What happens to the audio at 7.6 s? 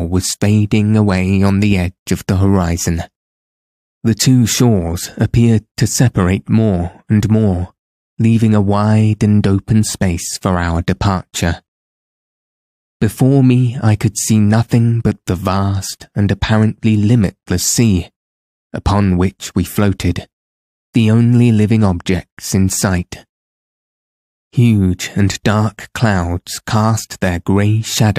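Nothing goes wrong at 7.6 s; the speech carries on intact through that moment, with no dropout, click or distortion to be heard.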